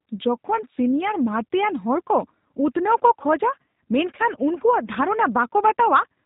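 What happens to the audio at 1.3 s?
As throughout, G.729 coding rebuilds the speech from a vocal tract model and sparse pulses, removing everything above 3.8 kHz and leaving it rough and synthetic.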